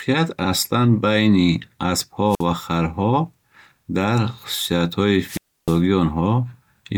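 The radio link of an analogue FM microphone fades twice, and each time the receiver's squelch cuts the output. At 2.28 to 2.45 s, hiss rises briefly, then a hole of near silence lasting about 54 ms opens before the speech returns on "ва харҳо". A longer wireless microphone squelch dropout follows at 5.22 to 5.81 s, where the static swell gives way to roughly 0.31 s of muted silence before the speech comes back.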